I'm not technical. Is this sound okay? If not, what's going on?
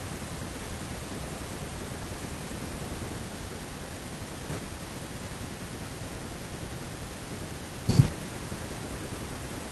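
Yes, this speech recording sounds fine, with no problems to point out. There's nothing in it that needs fixing.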